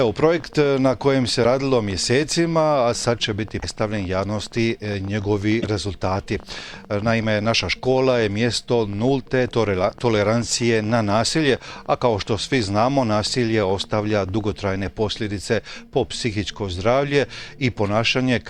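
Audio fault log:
0.05–14.71 s, train of clicks: irregular ticking, about 12 a second and roughly 200 in all, some peaking near the level of the audio itself and audible in the gaps too. Same-shaped pulses at an uneven pace, likely interference or a faulty connection.
1.43–1.45 s, 3.61–3.64 s, 5.61–5.65 s, broken MP3 bit reservoir: the audio jumps ahead, with a brief chirp, burst of noise or short hole each time. Likely frames cut out of the stream, so the next frame borrows bits from the wrong place. The damage fits 24 ms frames.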